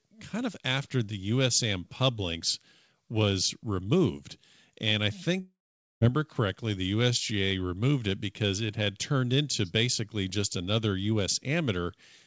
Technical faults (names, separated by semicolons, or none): long network dropout